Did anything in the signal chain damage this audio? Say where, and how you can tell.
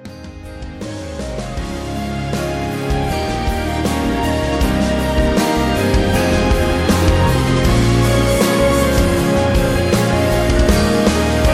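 No, nothing audible points to damage at any stage of the chain.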